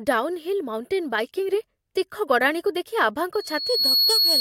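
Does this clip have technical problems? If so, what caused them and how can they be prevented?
Yes. From 3.33 s to the end at 4.41 s there's loudspeaker feedback squeal: the mic is hearing its own speaker, and a 4.3 kHz tone runs away, swelling over roughly half a second to sit about 5 dB above the speech. Keep mics behind speakers and pull gain down, or notch that frequency.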